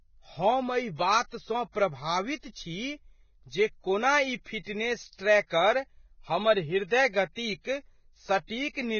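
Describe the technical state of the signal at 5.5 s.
A short smear of hiss runs ahead of the attack from 5.47 to 5.51 s, about 43 ms, softening its onset. This is pre-echo: the transform block's quantisation noise, sized for the loud attack, spreads back into the quieter moment just before it.

Across this moment the speech sounds hissy and grainy, with roughened tones and nothing above 6.6 kHz. That fits heavy Vorbis compression, likely at a very low bitrate around 17 kbps, where the codec drops the treble and quantises the remaining detail so coarsely that it turns to noise.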